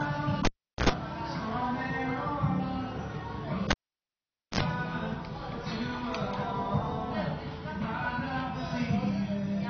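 A recording of everyday sounds with two cable pulled and plugged in events. At 0.45 to 0.90 s there is a pop, about 0.4 s of near silence, roughly 90 ms of 60 Hz mains buzz as the tip makes partial contact, and a second pop on reconnection. At 3.71 to 4.61 s the same sequence repeats with about 0.85 s of dropout and roughly 60 ms of buzz. Throughout, nothing is present above 6.6 kHz and the texture carries low-bitrate coding artefacts, although the file is a high-bitrate MP3. This is likely low-bitrate audio saved at a high bitrate. The band limit and smearing fit an earlier encode near 24 kbit/s that the later high-rate MP3 pass merely preserved.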